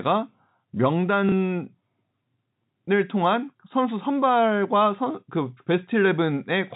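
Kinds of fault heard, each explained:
Packet loss with last packet repeated: a small blip, from 1.29 to 1.32 s. About 30 ms of audio went missing, which fits one lost packet, and the receiver filled the gap by replaying the previous packet.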